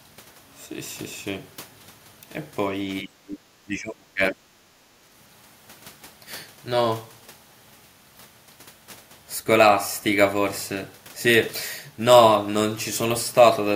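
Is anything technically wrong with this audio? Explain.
Yes. The speech sinks by around 25 dB from 3.02 to 3.44 s and again from 3.66 to 4.41 s. This is speech suppressed in double talk, likely an echo canceller treating overlapping far-end speech as echo and turning both down.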